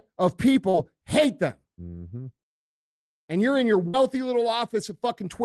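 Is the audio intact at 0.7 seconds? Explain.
No. From 0.69 to 0.76 s the speech briefly smears: a short concealed packet loss, where 40 ms never arrived and the receiver extended the preceding sound to fill it.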